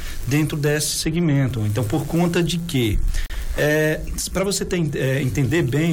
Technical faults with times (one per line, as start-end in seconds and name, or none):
3.26-3.30 gap at a join of encoded pieces